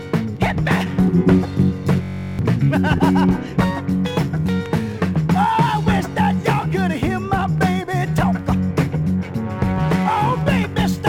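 From 2.03 s to 2.39 s the sound freezes into a rough, steady buzz at about 46.9 Hz, as one 21.33 ms fragment repeats 17 times before normal audio resumes. This is a system hang loop: the computer or audio driver stalled while the playback hardware kept cycling through the same ring buffer, which fits a 1024-sample buffer. Around 400 ms of the original audio is missing behind the buzz.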